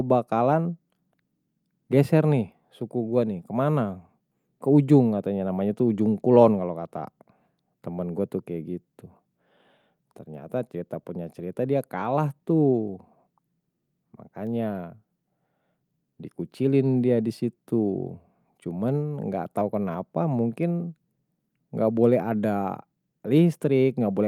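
No technical faults can be heard anywhere in this speech recording. The audio stays steady and continuous from the first moment to the last.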